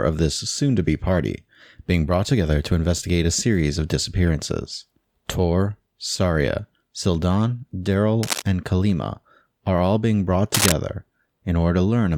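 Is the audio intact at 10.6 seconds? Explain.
No. Right after "are all being brought", from 10.54 to 10.72 s, a burst of dense, uneven scratching and rustling sits over the speech at roughly the same loudness. This is cable scratch noise, likely from a worn cable or connector shifting and rapidly changing its contact resistance.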